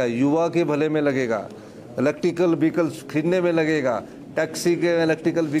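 No technical fault can be heard anywhere in the audio. There is nothing to pin to a time or trace to a cause.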